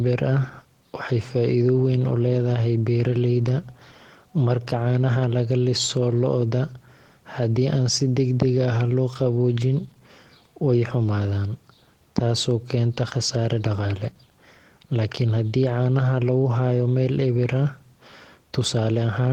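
Opus voice compression runs throughout the speech, plainly audible. SILK's coarse excitation coding makes the voice hoarse and faintly robotic, yet a CELT layer keeps content up to 20.2 kHz. That intact top, unlike narrowband muffling, points to hybrid mode near 16 kbps.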